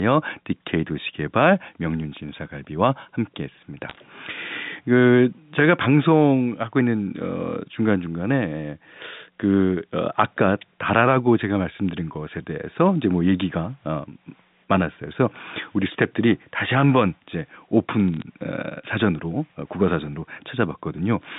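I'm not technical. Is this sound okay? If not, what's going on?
No. There are bit errors on a digital phone line. Short bursts of crackle and sharp ticks appear at about 3.89 to 3.95 seconds and 18.14 to 18.22 seconds. A few digital bits got flipped in transit. Each flip spoils one tiny piece of the sound.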